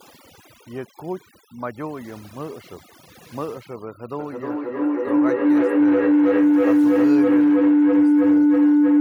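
Throughout the clip, overdone noise removal is at work: the noise reduction was set too aggressively, switching off individual frequency bands whenever they come close to its noise estimate and taking the softer parts of the speech with them. The background drops to near silence dotted with twinkling specks.

From 4.19 s until the clip ends, a feedback howl takes over. The signal is circling from microphone to loudspeaker and back, gaining level on every pass, so the repeats grow and narrow to a tone around 300 Hz. The loop repeats roughly every 0.3 s, and the howl peaks about 15 dB above the speech.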